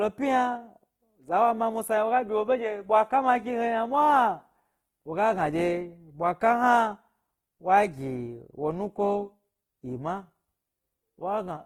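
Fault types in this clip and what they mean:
Opus compression: Throughout the speech there is a plainly audible rough, grainy texture, with tonal parts of the sound turning noisy rather than swirling or hollow, while the top end still reaches about 20.1 kHz. The likely cause is Opus coding in its CELT music mode at a low rate, consistent with around 16 kbps. The encoder keeps each band's energy but, short of bits, fills band detail with folded or noise-like content.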